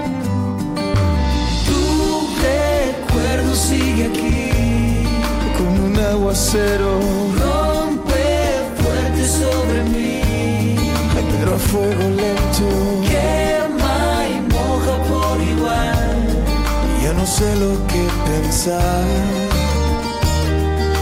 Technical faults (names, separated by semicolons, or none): hard clipping